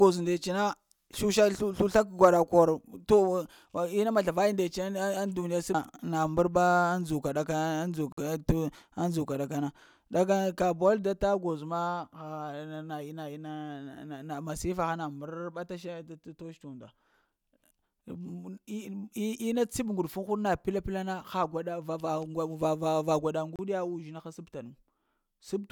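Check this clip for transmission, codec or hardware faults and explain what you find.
Two brief dropouts interrupt the speech, at 8.12 to 8.18 s (50 ms) and 23.56 to 23.59 s (30 ms), most likely Bluetooth stalls: delayed packets let the headphone buffer run dry. The sound cuts to silence and resumes abruptly. The waveform flatlines, and the spectrogram shows a clean vertical blank gap.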